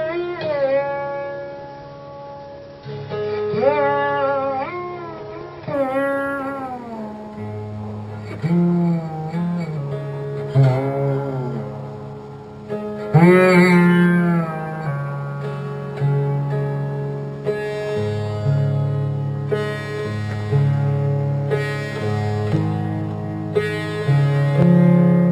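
From 5.74 s to the end, imaging from linear upsampling appears. Straight-line interpolation, which fits a 12 kHz to 48 kHz rate change, dulls the top of the band and leaves a faint mirrored copy between 6 kHz and 12 kHz, around 35 dB down. Unlike aliasing, this light metallic shimmer sits above the dulled top and tracks it.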